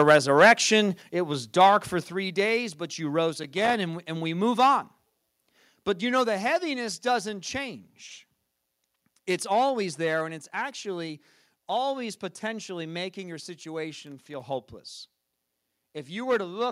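From the start to 0.53 s the loudest peaks are flattened, likely microphone overload: the input drove the converter about 3 dB past full scale, so a small fraction of samples have their tops sheared off, leaving a harsh, crackling edge on those peaks.

A microphone volume step-down follows at 1.02 s, 2.04 s and 5.1 s. Each is an abrupt level drop of about 5 dB, 4 dB and 1 dB respectively, affecting speech and background alike. This is likely software gain control lowering the device input after the clipped opening.

Loose connector crackle appears from 3.43 to 3.74 s and again from 14.07 to 14.41 s. A poor contact is intermittently breaking the signal path, chopping the audio into an irregular burst of scratchy crackle lasting roughly a third of a second each time.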